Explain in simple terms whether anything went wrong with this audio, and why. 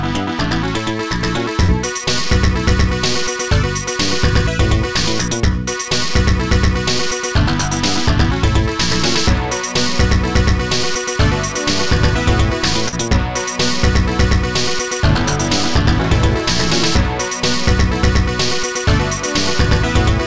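Twice, around 1.64 to 1.71 s and again at 12.88 to 12.95 s, a short concealed packet loss happens. About 40 ms of audio didn't arrive in time, so the receiver patched the gap by stretching the sound just before it. You hear a quick smear or wobble.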